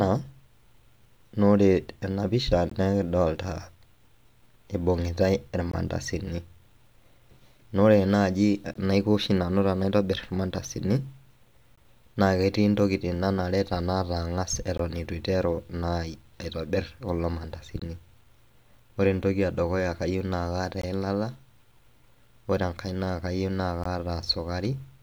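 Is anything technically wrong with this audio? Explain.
Yes. There is a gap between chunks at 2.70, 5.72, 8.74, 11.76, 14.78, 17.80, 20.82 and 23.84 s. Each is a 20 ms silence inserted after every 3 s chunk, heard as a hard-edged dropout in the speech.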